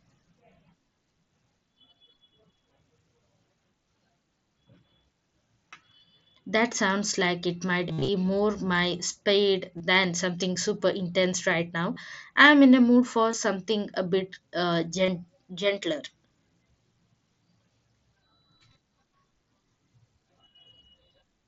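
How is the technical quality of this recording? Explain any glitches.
The recording is marred by concealed Bluetooth headset packet loss: voice packets from the headset never reached the phone, so the receiver filled each gap by repeating the best-matching recent stretch of waveform. The worst case, 7.89 to 8.08 s, loses about 142 ms of audio within 195 ms, including a 67.5 ms run that holds as a buzzy, full-level tone before a slight warble. Shorter losses at 9.78 to 9.80, 11.94 to 11.96, 13.32, 15.06 to 15.08 and 18.73 s each last 15 to 22.5 ms. Throughout, the mSBC headset link limits speech to 8 kHz with a light graininess on louder sounds.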